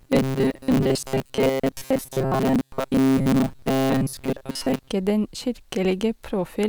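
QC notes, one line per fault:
0.01–4.92 s: robotic sound from repeated short buffers. The speech turns into a rigid, metallic buzz locked at 133 Hz that still loosely follows the syllables. The likely cause is new audio arriving too seldom, so playback keeps looping the most recent short buffer, about 7.5 ms long (one over 133 Hz), and skips the real signal in between. For most of this stretch the output is repeated material, and that constant looping imposes the fixed pitch.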